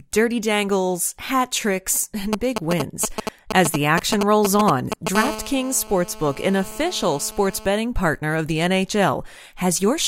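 From 2.33 to 5.17 s, after "dirty dangles hat tricks", GSM signalling bursts appear. A nearby 2G phone is sending short radio bursts, and the audio circuit rectifies them. They sound like galloping groups of ticks and brief buzzes at 217 Hz, roughly as loud as the speech.

At 5.17 s the bursts become a continuous GSM phone buzz, which points to the phone entering a call. It lasts until 7.66 s, just before "partner of the". It is a hard, raspy 217 Hz buzz rich in harmonics, about 12 dB below the speech.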